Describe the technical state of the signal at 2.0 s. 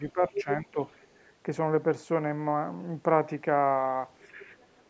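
At 2.0 s the speech is intact, with no fault present, only the normal band-limiting of call microphone processing, which leaves nothing above 8 kHz and trims the lowest bass.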